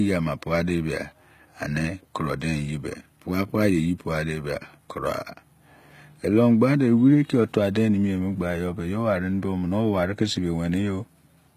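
From start to finish the speech carries plainly audible codec damage, most likely HE-AAC compression at a low rate, something near 20 kbps. The treble above the core band is rebuilt from copied lower bands, so s sounds turn gritty and metallic, with harmonics misaligned across the crossover. On a spectrogram the upper region looks smeared and blocky, repeating lower patterns under a coarse envelope, with nothing at all above 14.9 kHz.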